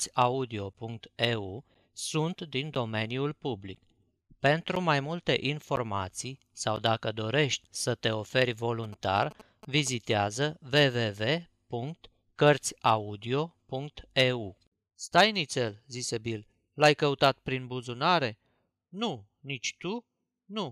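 A blocked USB bus or audio driver causes periodic dropouts from 0.74 to 6.77 s, ending before "dacă dorești să te". Once a second, about 10 ms of speech is replaced by silence, heard as regular ticks.

A nearby phone's GSM signalling bursts are rectified by the audio circuit from 8.84 to 10.12 s, after "dorești să te oferi", producing a galloping 217 Hz buzz about 20 dB below the speech.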